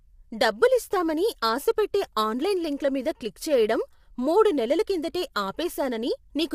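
Throughout the clip, low-delay AAC compression is the likely cause: short coding frames resolve the speech harmonics poorly at a rate that fits about 32 kbps. The speech sounds plainly rough and grainy, with noise between harmonics and nothing above 15.7 kHz.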